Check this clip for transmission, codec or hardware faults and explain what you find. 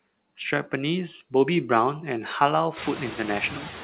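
One fault runs through the whole clip: noise suppressor artifacts. The suppressor pulls down whatever bands it reads as steady noise by about 10 dB, frame by frame, so the background dips in the gaps and comes back up under the speech. That pumping is easiest to hear once the room noise jumps around 3 s and sits only about 14 dB below the speech. The audio is band-limited at 4 kHz, which fits a narrowband G.711 call.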